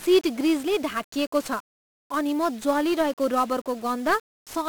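From the first moment to the last, the speech carries heavy 1-bit DFPWM compression damage. Each sample is just one up-or-down bit nudging an adaptive level, which fits a rate around 48 kbps, so loud broadband quantisation noise leaves everything fuzzy and crackly, with the treble buried in hiss.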